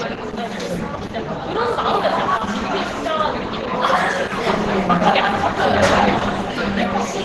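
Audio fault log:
throughout Opus compression: muffled, hoarse, grainy sound; the spectrogram shows a flat cut-off at 12 kHz, likely from heavy Opus hybrid-mode encoding near 12 kbps.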